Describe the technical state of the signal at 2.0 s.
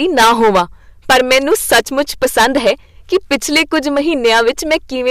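At 2.0 s the speech is passing through a stage driven about 18 dB beyond what it can handle, so hard clipping is present here as it is throughout the clip. Roughly a tenth of the samples hit the ceiling and have their peaks sliced flat. Those squared-off tops spray harmonics high into the spectrum, so rather than an occasional crackle, every louder syllable carries a harsh, gritty fuzz riding on the speech.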